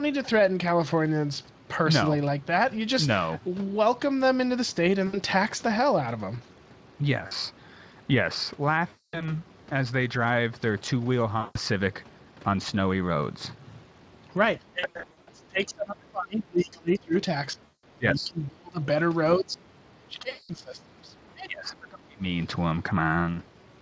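Gaps filled by VoIP packet loss concealed by the speech codec occur at 5.07–5.17, 7.27–7.32, 8.87–9.34, 11.39–11.58, 14.79–15.29 (scattered short dropouts), 17.65–17.84 and 20.29–20.51 s. In each, the decoder extends the last pitch and spectral shape at falling gain, giving a buzzy, fading smear.

From 14.6 to 17.13, 17.53 to 18.81 and 19.38 to 22.23 s, the talker dips by up to about 30 dB and breaks into pieces, likely speech suppressed in double talk, where the echo canceller ducks the near voice while the far side talks.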